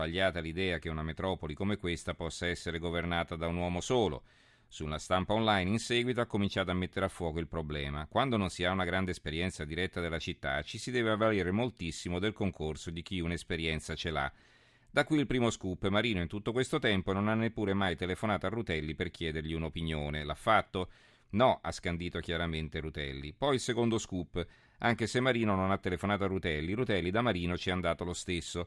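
No technical faults can be heard anywhere in this speech recording. There is nothing in it that calls for a timestamp or an explanation of a cause.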